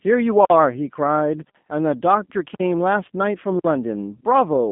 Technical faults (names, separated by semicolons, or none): G.729 codec